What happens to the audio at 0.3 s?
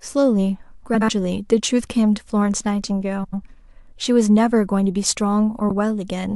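Nothing goes wrong at 0.3 s; the speech there plays through intact, with no dropout, click, distortion or other fault.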